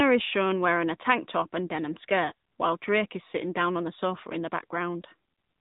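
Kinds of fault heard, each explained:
AMR narrowband mobile codec: The speech has passed through the narrowband speech codec used on 2G and 3G mobile calls. It samples at 8 kHz and rebuilds the voice from a vocal tract model driven by a few pulses per short frame. Here nothing passes above 3.8 kHz, so the speech sounds muffled and boxed in. The damage is plainly audible throughout, with a buzzy, synthetic edge. That fits a mid-range mode of about 10 kbps.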